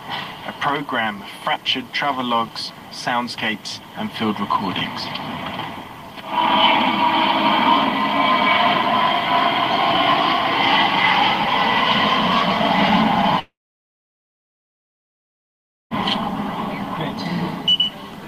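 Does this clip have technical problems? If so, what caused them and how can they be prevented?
Yes. From 13.39 to 15.94 s there is a long network dropout. The last sound carries on briefly as a fading buzz, then about 2.4 s of silence follows. When audio returns, roughly 2.5 s of material is simply gone. Unlike a brief packet-loss glitch or a mute, the sound jumps ahead rather than resuming where it stopped. The likely cause is a stalled connection delivering no packets. A more stable link with a larger jitter buffer and retransmission would prevent it.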